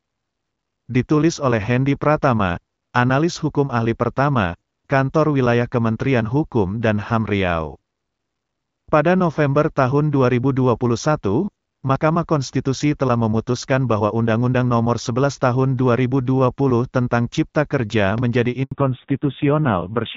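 At 18.63 s the speech fades out within a few tens of milliseconds and stays silent until 18.71 s. This is a handover gap of about 80 ms, where the call was passed from one network to another and no speech frames arrived during the switch. Unlike a packet-loss glitch, there is no concealment smoothing it over with a stretched or buzzy echo of the previous sound. The audio simply goes dead, and whatever was said in that window is lost.

From 18.71 s to the end, the sound is duller and rougher, with nothing above 4 kHz. This is a fallback to narrowband. Before the gap, the HD Voice band reached up to about 7 kHz with only light coding damage, consistent with AMR-WB at around 12.65 kbit/s. After the gap, the coarse, gritty texture points to a low-rate narrowband codec, probably AMR-NB near 5.9 kbit/s. Because it starts right at the handover and the bandwidth never recovers, it is a codec switch rather than a brief bandwidth dip within the wideband stream.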